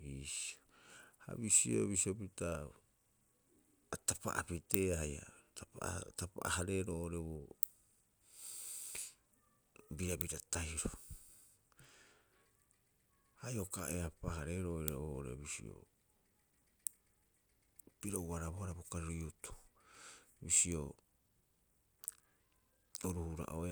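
Nothing technical goes wrong anywhere in this stretch of speech, so there's no fault here to point to.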